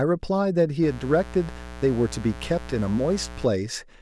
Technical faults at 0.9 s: mains buzz

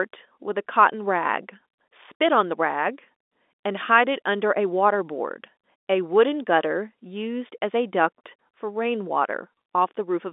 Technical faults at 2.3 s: none

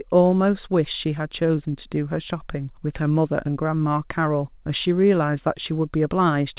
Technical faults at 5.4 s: none

